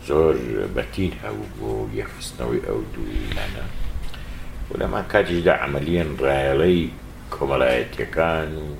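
No technical faults are audible anywhere in the recording.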